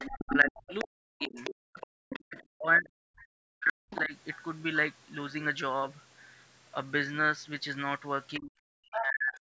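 From 0.0 to 0.85 s, a second voice sits about 10 dB under the speech. This is most likely the other side's voice leaking through: the loudspeaker echo was not fully cancelled. It returns at 1.19 to 2.44 s and 3.9 to 4.01 s, about 15 dB down, and again at 8.94 to 9.05 s, only about 5 dB down.

At 0.25 to 1.4 s, 2.2 to 4.14 s and 8.39 to 9.55 s, the talker's own speech drops by roughly 40 dB while the far side is playing on the loudspeaker. This is likely speech suppressed in double talk. It differs from leakage because the main voice is lost rather than an extra one added.

Between 1.68 and 1.92 s, the room sound briefly falls about 40 dB and then comes back. This is background gated by the echo canceller, which hits the ambience rather than the speech.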